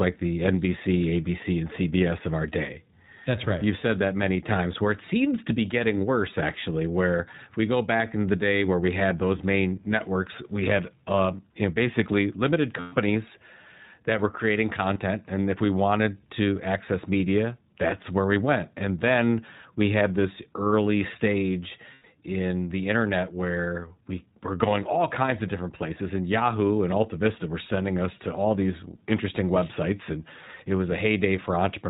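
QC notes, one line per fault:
Throughout, iLBC codec: narrowband, with nothing above 4 kHz, and a plainly audible rough, slightly synthetic edge on the speech. It sounds like the 15.2 kbps, 20 ms frame mode, where each frame's excitation is coded on its own.
12.80–12.93, 14.94–14.98, 21.94–22.05 s, lost iLBC frames: gaps after "you know basically limited", after "that were creating", and after "had this early stage" before "in the internet where". Each sounds like a held, buzzy vowel where the decoder repeats the last pitch cycle with noise. The gaps fit about 120, 20 and 100 ms of dropped frames, and recovery is immediate.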